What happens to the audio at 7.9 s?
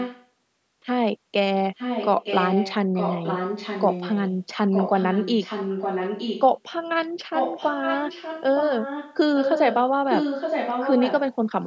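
At 7.9 s there is an echo leak, running from 7.33 to 9.16 s. A delayed copy of the speech returns about 0.92 s late, only slightly quieter than the original. The likely cause is a far-end speakerphone whose echo canceller let its own playback through.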